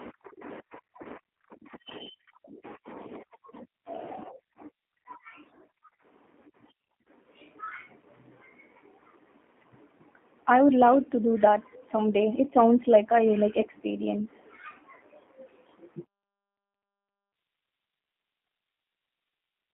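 Throughout, G.729 codec damage is plain: the speech sits in a 200 Hz to 3.5 kHz line band and sounds rough and synthetic, which fits an 8 kbit/s stream. Simple band-limiting would sound muffled; this sounds rebuilt.

At 1.03–1.06 s and 13.61–13.66 s, VoIP packet loss concealed by the speech codec appears as a brief buzzy or noisy smear that fades, rather than a silent dropout or click.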